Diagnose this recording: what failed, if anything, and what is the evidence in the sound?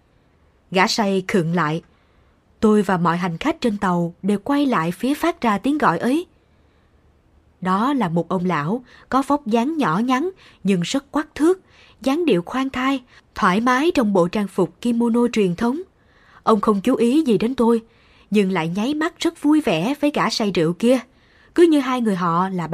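A voltage step or pulse, likely from a plug, a switch, static or a driver glitch, entered the signal chain. The result is a single loud pop from 15.63 to 15.65 s, just after "kimono truyền", standing several decibels above the speech, which continues underneath.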